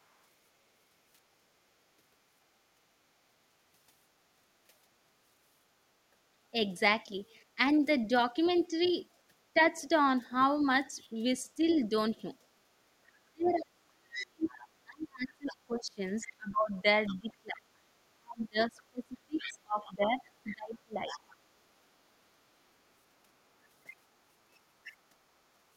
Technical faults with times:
7.56-9.57 speech suppressed in double talk
8.45-8.59 other side's voice leaking through
10.62-11.62 speech suppressed in double talk
11.66-11.87 other side's voice leaking through
13.22-21.28 speech suppressed in double talk
13.46-17.33 other side's voice leaking through
19.41-21.36 other side's voice leaking through

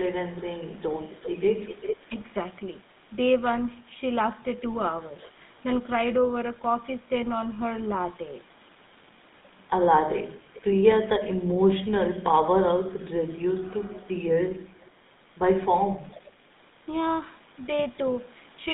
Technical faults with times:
0.00-18.73 GSM full-rate codec

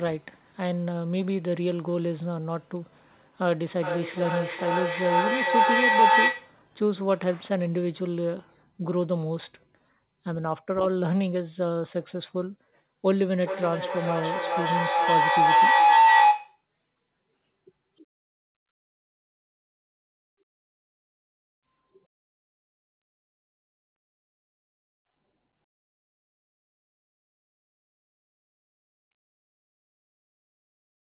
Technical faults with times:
3.75-6.62 feedback howl
13.08-16.64 feedback howl

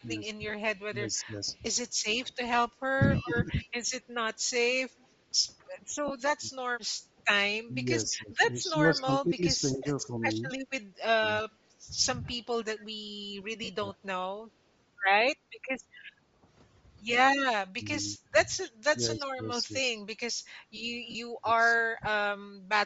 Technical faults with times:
0.00-22.86 Bluetooth LC3 compression
0.00-5.67 echo leak
0.01-14.01 speech suppressed in double talk
6.08-6.11 lost LE Audio frames
8.98-12.34 echo leak
13.64-13.69 lost LE Audio frames
15.42-15.53 background gated by the echo canceller
17.75-22.19 speech suppressed in double talk
18.63-18.71 echo leak
21.11-21.15 lost LE Audio frames

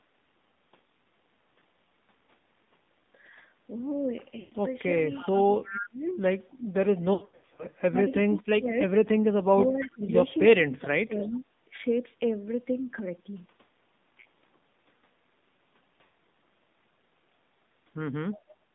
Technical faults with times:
0.00-18.75 AMR narrowband mobile codec
4.40-4.53 lost AMR speech frames
5.15-5.87 echo leak
5.23-8.77 speech suppressed in double talk
7.14-7.66 lost AMR speech frames
8.84-8.93 echo leak
9.44-11.45 speech suppressed in double talk
9.63-10.40 echo leak
16.04-16.13 lost AMR speech frames
18.35-18.54 echo leak
18.64-18.75 background gated by the echo canceller

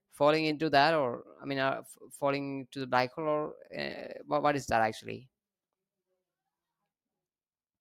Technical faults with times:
none

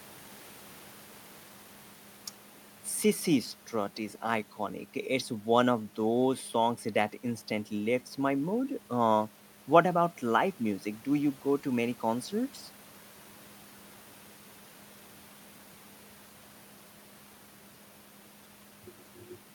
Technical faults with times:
none

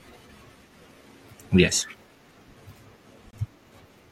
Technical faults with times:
3.31-3.33 gap between stream segments

